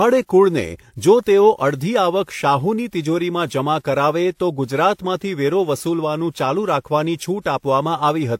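Throughout the speech, transcoding between lossy codecs is audible. Nothing sounds above 16.2 kHz. Two kinds of artefacts are layered, likely from low-bitrate HE-AAC later re-encoded as WMA.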